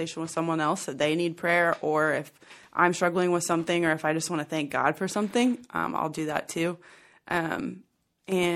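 MP3 compression runs from start to finish of this speech clip, and the damage is plainly audible. The s sounds carry a watery, swirly quality with metallic chirps, while consonant onsets blur. The likely cause is an encoder short of bits, zeroing quieter frequency lines that flicker in and out between frames, which fits a rate of around 64 kbps.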